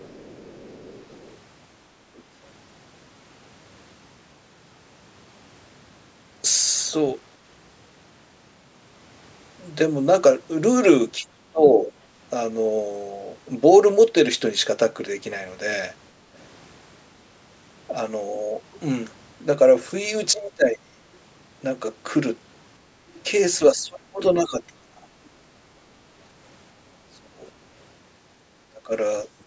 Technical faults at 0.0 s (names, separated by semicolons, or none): other side's voice leaking through